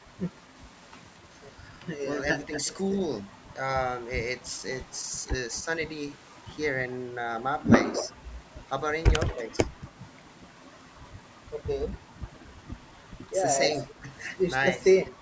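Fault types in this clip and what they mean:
Echo leak: A delayed copy of the speech comes back about 230 ms late, in short scraps at 9.3 and 13.8 s and longer stretches near 2.4, 4.4 and 8.0 s, likely a loudspeaker echo the far end's canceller didn't fully remove, sometimes faint, sometimes nearly as loud.
Speech suppressed in double talk: Around 9.3 to 9.6 s and 13.9 to 14.8 s the talker dips briefly by about 5 dB while the far side's sound was playing, likely the echo canceller ducking everything when it couldn't tell the near talker from the returning echo.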